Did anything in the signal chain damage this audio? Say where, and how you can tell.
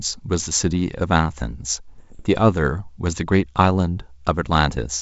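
Yes. Bit errors on the ADPCM link corrupted the G.722 stream and knocked the decoder's predictor off track, causing rough pops and level jumps at 0.38–0.50 s and 1.98–2.24 s.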